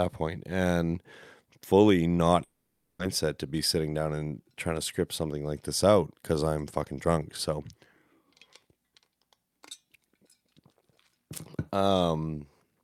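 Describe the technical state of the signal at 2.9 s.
At 2.9 s the signal sits inside a likely long network dropout from 2.43 to 3.01 s. After "point and fully not", a brief fading buzz gives way to about 0.46 s of silence. Speech resumes at "to be sitting down" with roughly 0.56 s never played, a gap far longer than a short packet-loss glitch.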